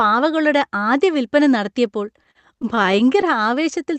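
Just after "ആദ്യ വിൽപ്പന നടത്തിയപ്പോൾ", from 2.17 to 3.25 s, repeated stalls (stutter) set in. The jitter buffer ran dry twelve times, and each wait, up to 41 ms, was filled by holding the last sound, about 156 ms in all. Nothing is lost, but the speech drags and catches. A spectrogram shows short, smeared, repeated slices, and the waveform shows held stretches. The Opus call path caps the spectrum at 8 kHz.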